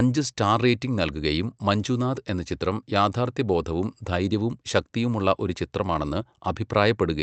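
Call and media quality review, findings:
No faults found in this speech recording. The WebRTC call path is working as expected, and its codec is audible as a high-frequency limit near 8 kHz, which fits Opus running at a wideband setting.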